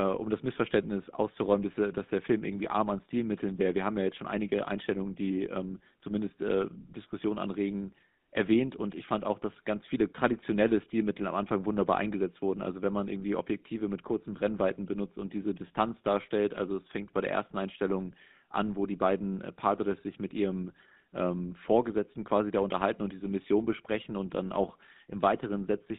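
GSM full-rate codec damage runs through the whole speech clip. The coder rebuilds speech from a vocal-tract model driven by sparse, evenly spaced pulses, so the sound turns plainly buzzy and gravelly, confined to 150 Hz to 3.7 kHz, which fits 13 kbps GSM full rate.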